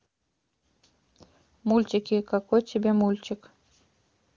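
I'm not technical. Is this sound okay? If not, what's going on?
Yes, no faults are present; this is speech through the AMR wideband (HD Voice) phone codec, so nothing is heard above about 7.2 kHz and any codec damage is faint at most.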